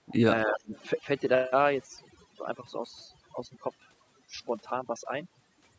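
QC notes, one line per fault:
Throughout: overdone noise removal. The background drops and breaks up into twinkling specks. Noise reduction set too strong is shutting off single frequency bands near its noise estimate, and quiet parts of the speech go with them.
0.02 to 0.06 s and 0.45 to 0.74 s: speech suppressed in double talk. The speech dips sharply, by roughly 20 dB in the brief first dip and around 30 dB in the longer second one. The likely cause is an echo canceller turning down everything while both sides talk at once.
0.73 to 0.83 s: echo leak. A faint delayed copy of the speech, about 35 dB below it, trails by 279 ms. It is likely residual loudspeaker echo that the loudspeaker side's echo canceller failed to remove and sent back.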